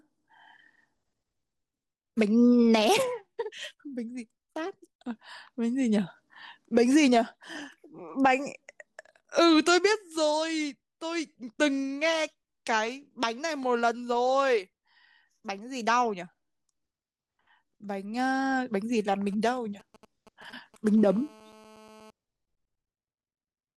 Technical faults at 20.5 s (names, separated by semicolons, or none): GSM signalling bursts